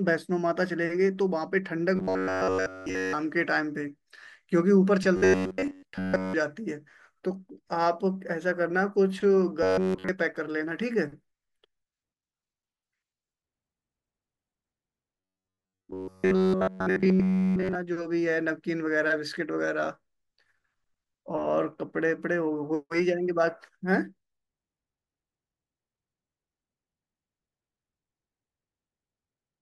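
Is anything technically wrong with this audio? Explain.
Yes. At 1.96–3.14 s, 5.17–6.34 s, 9.63–10.09 s and 15.20–17.75 s, the voice becomes a rigid, metallic buzz fixed at 93.8 Hz that only loosely follows the speech. This is robotic sound from repeated short buffers. New audio likely arrived too slowly, so a slice of about 10.7 ms was looped in place of nearly all the real signal in those stretches.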